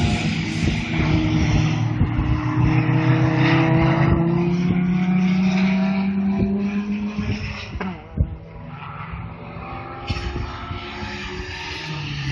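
Nothing goes wrong anywhere here, so there's nothing to point to at any moment in the clip.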